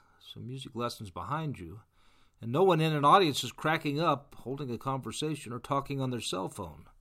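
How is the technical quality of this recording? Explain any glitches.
No glitches or faults are audible.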